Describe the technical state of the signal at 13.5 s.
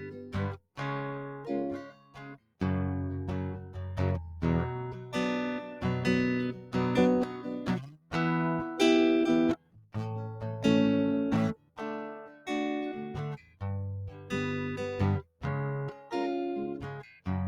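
At 13.5 s the music sinks noticeably, dipping by about 13 dB between 13.37 and 14.32 s, with roughly half a second of that span pulled down. This is sound cut by the noise suppressor: it mistook the sustained material for noise and attenuated it more than surrounding passages.

Across the whole clip the level pumps and thins, with held material swinging by around 10 dB while attacks pass through. A noise suppressor built for speech was applied to music, treating steady tones and tails as noise to remove.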